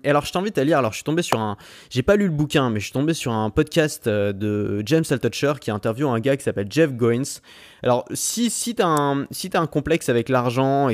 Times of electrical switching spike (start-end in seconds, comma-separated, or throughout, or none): 1.32, 8.97